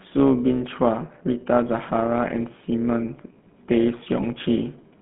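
Speech runs through two faults for its whole length. The first is overlap-add ripple. The level swings by about 6 dB at roughly 200 Hz, giving a metallic buzz with extra tones around each note. It comes from windowed frames being rejoined with an overlap whose gains do not sum to a constant, so the loudness dips once per frame. Unlike a slow tremolo or pumping compression, the modulation is fast and perfectly regular, tied to the frame rate rather than to the signal level. The second is GSM full-rate codec damage, and it is plainly audible. The speech has a buzzy, gravelly texture because the codec drives a vocal-tract model with sparse, regularly spaced excitation pulses. The line band runs from 150 Hz to 3.5 kHz, with nothing above 3.7 kHz, and the sound fits the 13 kbps GSM full-rate codec. What separates it from plain telephone band-limiting is the grainy excitation buzz on top of the dull top end.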